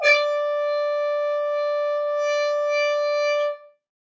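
No technical faults can be heard; the sound carries the usual mark of a call's microphone processing, with the lowest bass trimmed away by its high-pass filter and nothing present above 8 kHz.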